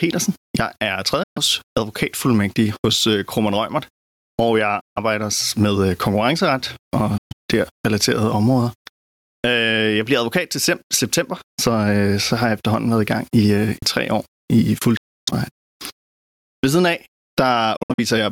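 Throughout the speech, the gain swings by about 20 dB, flattening the dynamics. This is likely gain pumping from excessive gain driving a fast limiter.

At 1.23 s, 4.81 s and 7.18 s, the speech cuts to silence for 128 ms, 149 ms and 128 ms, then resumes further on. These are likely Bluetooth dropouts, where late packets were discarded before reaching the headphones.

At 8.87 s and 13.82 s, the speech skips forward with a seamless join, losing roughly 50 ms each time. This is likely audio missing between chunks, as the 5 s spacing fits a recorder dropping a sliver at each chunk boundary.

At 14.97 s, a longer silent hole of 299 ms appears from the same dropout mechanism. From 17.76 s to 18.00 s, 149 ms of sound drops out as several short holes spread over 213 ms, the longest lasting 64 ms.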